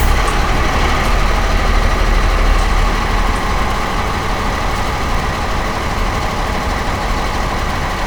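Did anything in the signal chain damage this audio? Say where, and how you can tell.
Yes, chunks out of order in the buffer stage at 3.62–3.76, 5.20–5.29 and 7.66–7.76 s: 46 ms blocks play one or two slots late, causing jumbled joins.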